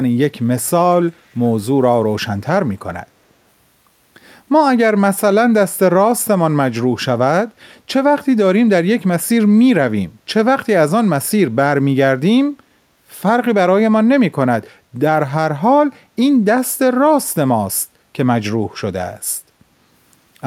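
Echo leak at 1.3 to 1.41 s in this speech recording: a brief scrap of the voice returns 333 ms after the original, very faint at roughly 40 dB below it. The likely cause is a far end listening on a loudspeaker whose echo canceller failed to strip everything its microphone picked up, so a delayed residue of the voice was sent back into the call.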